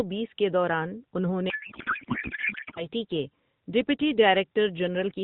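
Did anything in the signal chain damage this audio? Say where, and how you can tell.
Yes, at the codec stage: a codec payload misread from 1.50 to 2.86 s, just before "کے ڈپٹی", where the speech turns into garbled warble that barely tracks it. It sounds like octet-aligned AMR frames being unpacked as bandwidth-efficient, so every field lands wrong until the packing agrees again.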